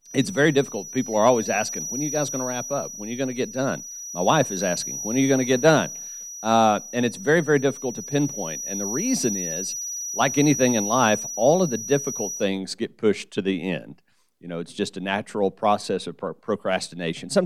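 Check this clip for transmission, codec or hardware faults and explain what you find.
The speech carries one fault, a feedback whistle, from 0.0 to 12.5 s.

A thin, steady tone at 5.8 kHz sits about 10 dB below the speech, swelling and fading slowly in level. It is likely caused by a loudspeaker-to-microphone loop held just at the edge of feedback, sustaining that single frequency without running away.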